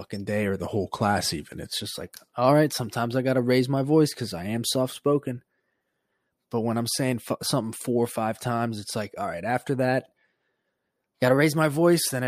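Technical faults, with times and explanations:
0.61 to 1.71 s, drift correction step: just after "day or", the speech drops about 5.5% in speed and about 98 cents in pitch, nearly a semitone flat, then snaps back before "just like all right". This is likely a clock-matching resampler slowing playback in one step to refill its buffer.
11.05 to 11.58 s, drift correction step: the opposite jump, about 5.5% faster and 93 cents sharp for half a second, likely the same correction draining the buffer.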